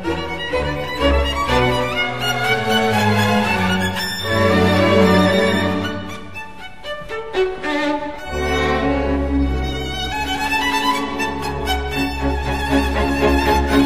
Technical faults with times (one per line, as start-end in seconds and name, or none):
none